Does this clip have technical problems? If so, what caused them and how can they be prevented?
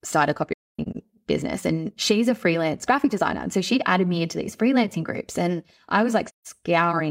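Yes. AAC frame loss with muting leaves soft-edged holes in the speech from 0.53 to 0.97 s, about 340 ms of missing sound with one gap lasting about a third of a second, and again from 6.27 to 6.47 s. The decoder zeroed the lost frames' spectra, and the overlapping windows fade in and out, so there is no repeated sound, unlike a hard dropout or concealment. Error protection or retransmission on the stream prevents it.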